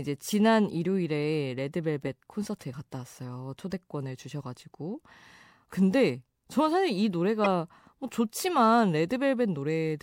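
A speech clip with a corrupt frame decoded at 7.44 to 7.46 s: a few consecutive compressed frames arrived with damaged bits, and the decoder played them anyway instead of concealing them. The misread gains and codes put energy at the wrong frequencies for that short span, so the speech is broken by a sudden blip, a brief squeaky burst of noise peaking at around -15 dBFS.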